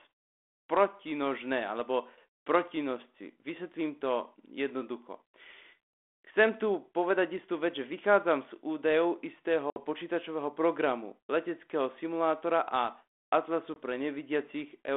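At 9.70 to 9.81 s, right after "že vychádzam z údajov", packet loss on an ADPCM call cuts a hard-edged hole of silence about 60 ms long, roughly three packets. A second, shorter hole of about 20 ms, around one packet, follows at 13.74 to 13.77 s. Unlike a clean dropout, the speech around "počítačového programu leteckého simulátora" returns distorted, because the decoder's predictor and step size have drifted from the sender's and need a moment to realign. The telephone band of about 250 Hz to 3.5 kHz fits 32 kbit/s G.726.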